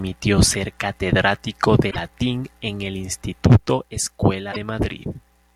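Right after "ser catedrático", from 1.90 to 1.97 s, the speech skips ahead and the next 70 ms or so come out as a garbled smear. It happens again from 4.51 to 4.56 s. That's most likely a broken MP3 bit reservoir: frames went missing, so the following frames, each roughly 26.1 ms, reached back for borrowed bits and decoded someone else's bytes. Each glitch spans only two or three frames.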